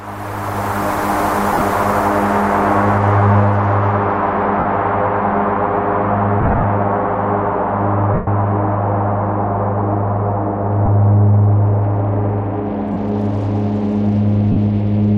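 Lost LE Audio frames show up seven times: 1.53 s (about 60 ms missing, scattered over 75 ms), 4.59 s (about 52 ms), 6.41 s (about 150 ms spread over 225 ms in short bursts), 8.14 s (a solid 127.5 ms), 10.86 s (22.5 ms), 12.93 s (30 ms) and 14.52 s (45 ms). Each time the LC3 decoder papers over the gap by replaying the last spectrum with randomised signs, so the sound briefly turns into a noisy, smeared wash.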